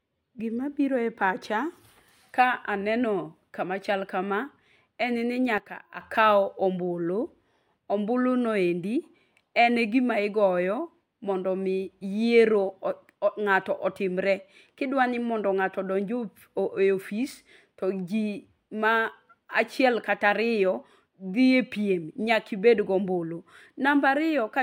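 A sudden gain jump runs from 5.58 to 6.0 s. The level of the speech drops by about 10 dB in a single step, with no fade, and the background noise falls by the same amount at the same instant, so the whole signal sounds abruptly quieter rather than the talker moving away. The level then snaps back at 6.0 s. The likely cause is a digital gain setting applied instantly, without a ramp.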